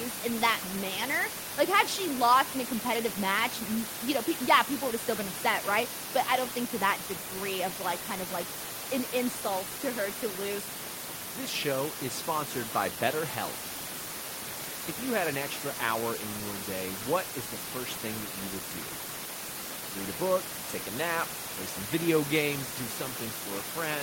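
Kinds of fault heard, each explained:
No faults can be heard anywhere in this recording.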